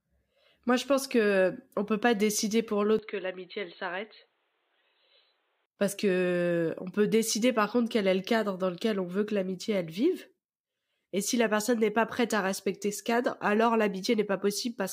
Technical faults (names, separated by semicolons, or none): input switched to a poorer device